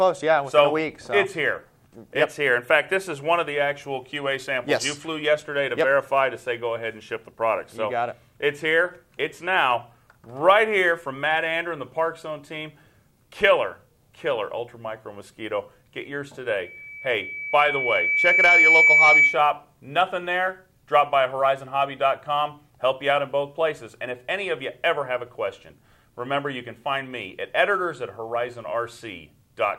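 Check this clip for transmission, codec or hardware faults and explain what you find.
One fault, a loudspeaker feedback squeal, runs from 16.58 to 19.46 s. The microphone picks up its own loudspeaker, and at 2.3 kHz the loop gain exceeds one. A single tone swells over roughly two seconds to around 10 dB above the audio. Unlike a steady interfering whistle, it grows by itself.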